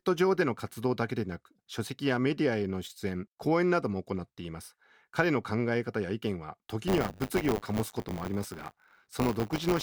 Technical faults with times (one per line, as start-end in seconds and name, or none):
6.87-9.83 buffer tearing